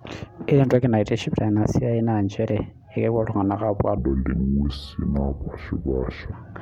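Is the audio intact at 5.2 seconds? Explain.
No. At 5.2 s the speech sits inside a section at the wrong speed, from 3.98 to 6.32 s, played at 0.671 times its recorded rate, likely from being fitted to the wrong clock. It sounds deep and dragged, roughly seven semitones low; a spectrogram shows harmonics squeezed downward and every feature stretched in time.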